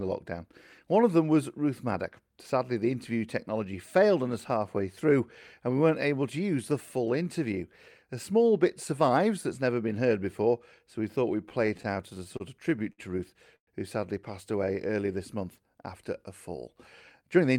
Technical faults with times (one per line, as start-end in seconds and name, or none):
11.49-13.00 repeated stalls (stutter)
13.56-13.69 call audio freeze
14.52-14.98 jitter buffer slow-down
17.22-17.54 jitter buffer speed-up